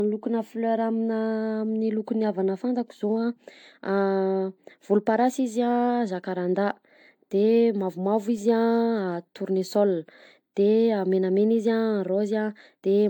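A speech recording whose whole duration has a swirly, smeared, hollow quality, with consonant attacks blurred. The character points to generation loss, most likely from roughly seven successive decode-and-re-encode passes through AAC-LC at a rate consistent with 96 kbit/s. Because each pass quantises on a shifted frame grid, noise and spectral holes accumulate, leaving the speech more degraded than a single encode at that bitrate would.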